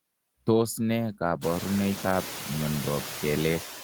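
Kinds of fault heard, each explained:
Noise suppressor artifacts, throughout: frame by frame, the suppressor lowers bands it treats as steady noise, by about 9 dB. The leftover background sinks and swells around the speech, especially after the room noise rises around 1.5 s.
Call bitrate drop, 0.54 to 2.25 s: a falling bandwidth estimate pushed the encoder from 32 down to 14 kbps, holding that lowest rate for about 1.65 s. The coarser coding makes the speech rough and muffled, with its highs dulled until the rate recovers.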